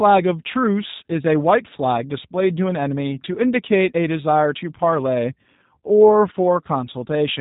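Speech coded throughout with the G.729 codec, consistent with 8 kbit/s: nothing above 4 kHz, plus a rough, buzzy synthetic texture from its pulse-based excitation that plain band-limiting wouldn't produce.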